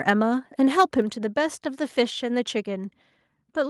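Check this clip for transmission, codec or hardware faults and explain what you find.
Two faults are audible, both tied to the microphone input level.

From 0.79 to 0.82 s there is microphone overload. The loudest part of the speech is pushed about 3 dB past the converter's ceiling, so the waveform tops are flattened, with around a tenth of the samples in that stretch clipped. The likely cause is an input volume set too high. The flattened peaks add a brief, harsh crackle to that syllable.

At 1.02 s the microphone volume is stepped down by about 5 dB. Both the voice and the background drop in level at once, just after the distorted peak. The likely mechanism is the call software detecting the overload and lowering the device's input gain in a single step instead of gradually, which is why the level falls abruptly rather than fading.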